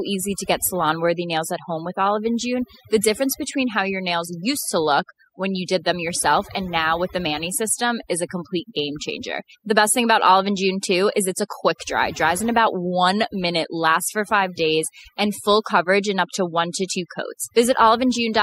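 Overdone noise removal runs through the speech: the suppressor cuts any band near its noise estimate, taking quiet parts of the voice too. Pauses fall to near silence with twinkling specks. A spectrogram shows dark gaps dotted with isolated flecks.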